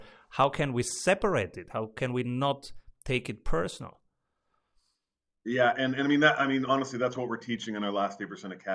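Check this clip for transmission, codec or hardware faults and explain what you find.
No transmission, codec or hardware faults are audible here.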